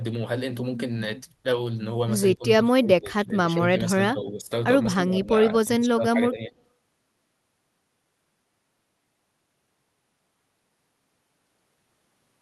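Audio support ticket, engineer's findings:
Speech dips and chops at 2.34–2.44 s, 2.63–4.5 s, 4.85–5.36 s and 5.61–6.56 s, mostly by about 20 dB, shallower near 5 s. Likely speech suppressed in double talk: the echo canceller mistook overlapping near-end speech for echo and attenuated it.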